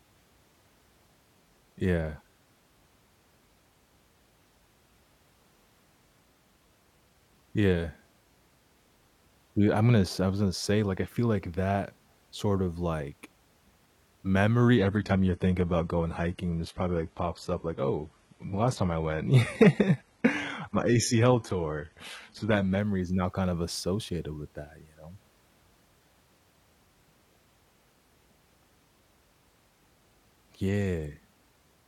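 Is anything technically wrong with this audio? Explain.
Yes. From 14.78 s to 22.78 s the speech suddenly turns duller and more processed, with nothing above about 11.8 kHz and a papery, synthetic sheen on the remaining treble. The quality snaps back at 22.78 s with no gap either way. This is an adaptive stream at a lower bitrate: for eight seconds the player switched to a cheaper version of the stream, which fits a drop from AAC at 96 kbit/s to HE-AAC at 16 kbit/s.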